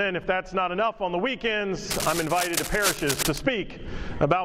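From 1.90 s to 3.38 s, cable scratch noise rides over the sound: dense, irregular bursts of scratching and rustling, roughly 5 dB below the signal. The likely cause is a worn cable, connector or control being moved, its contact resistance jumping erratically. On a waveform this shows as ragged, spiky fuzz on top of the signal for about 1.5 s. On a spectrogram it appears as broadband vertical streaks scattered unevenly across that span.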